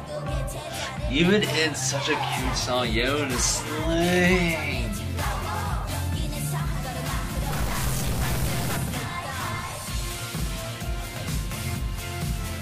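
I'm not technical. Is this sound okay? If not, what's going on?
No. From about 7.52 to 8.77 seconds there's a stretch of harsh, buzzy distortion, a gritty rasp laid over the sound, and it comes in fairly strong rather than as a faint hiss. That's the signature of a stuck bit, most likely a broken connection or converter fault where one piece of the digital data stays frozen on or off, so roughly half the samples come out wrong by a fixed amount, turning into that rough buzz.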